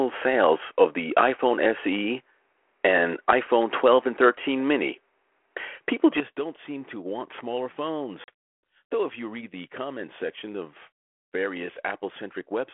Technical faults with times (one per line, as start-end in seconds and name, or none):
0.00-6.20 input switched to a poorer device
8.24-8.29 packet loss on an ADPCM call